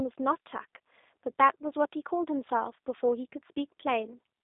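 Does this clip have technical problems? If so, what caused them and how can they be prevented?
Yes. G.729 codec damage runs throughout the speech. The band is held to roughly 300 Hz to 3.7 kHz, with nothing above 3.8 kHz, and the slightly rough, synthetic texture fits an 8 kbit/s coder rebuilding each 10 ms frame from a vocal-tract model and sparse pulses. To prevent it, capture or transmit through a wideband, higher-bitrate codec such as G.722 or Opus.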